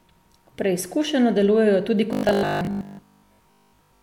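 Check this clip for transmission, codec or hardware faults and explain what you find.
There's one fault here, a robotic sound from repeated short buffers, and it runs from 2.13 s, right after "delujejo tudi", to the end of the clip. The speech turns into a stiff, metallic buzz pitched at 50 Hz. The likely cause is that audio stopped arriving often enough, so the playback kept looping a short chunk, about 20 ms judging by that 50 Hz buzz, while most of the real speech got skipped. The speech stays roughly traceable underneath, but the voice sounds mechanical.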